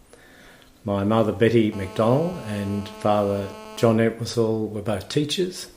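From 1.72 s to 3.90 s a hard, raspy buzz sits under the sound, pitched at about 217 Hz and thick with harmonics, holding steady at about 18 dB below the signal and bearing no relation to it. This is GSM phone buzz: a nearby 2G phone on a call transmits in bursts roughly 217 times a second, and the audio circuitry rectifies those radio pulses into an audible tone.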